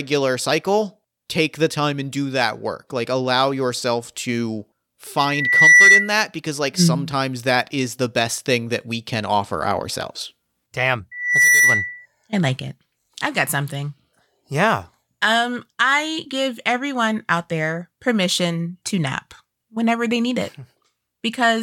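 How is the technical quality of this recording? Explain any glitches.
The recording has two bursts of loudspeaker feedback squeal. The first runs 5.17 to 6.14 s, between "allow yourself to" and "because like", and the second runs 11.11 to 12.06 s, just before "I like it I've". In both, the mic catches its own loudspeaker and a 2 kHz tone runs away, swelling over roughly half a second and a third of a second into a shrill whistle about 10 dB above the speech.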